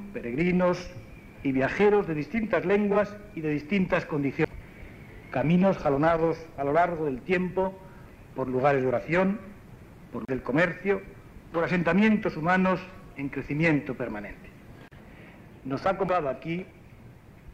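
The audio has two kinds of fault. AAC frame loss with concealment occurs at 2.91–2.97 s and 12.86–12.93 s. Each time, one missing frame of about 43 ms is patched from the last good spectrum, giving a brief smeared, noisy wash. On a spectrogram this looks like a short blurred vertical band. A CD skip at 4.45 s, 10.25–10.29 s and 16.08 s mutes the output for a few milliseconds, about 30 ms at 10.25 s, before play resumes elsewhere on the spiral. Each is heard as a tick with a jump, and the waveform shows a flat gap and a hard discontinuity.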